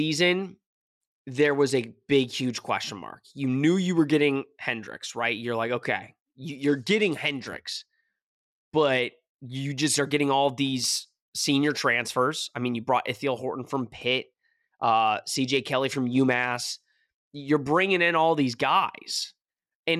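Bluetooth SBC bit pool drops at 1.13–2.58 s, 6.49–9.02 s and 13.79–17.50 s starve the upper sub-bands, leaving the speech dull and gritty, consistent with the bit pool falling from 28 to 13.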